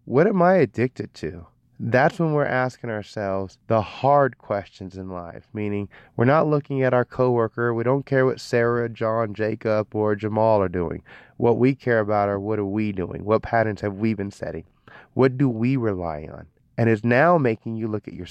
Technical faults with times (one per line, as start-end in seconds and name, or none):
none